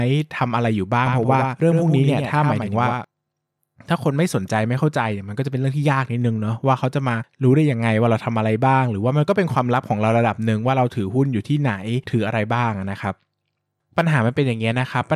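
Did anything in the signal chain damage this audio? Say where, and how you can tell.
Yes. From 1.06 to 3.04 s the speech carries a doubled audio track: a full-band copy roughly a tenth of a second behind, a few dB quieter, with no decay. The spectrogram shows each syllable's pattern repeated, offset and abruptly cut at both ends. The likely cause is a second, slower capture path or an edit mixing two copies.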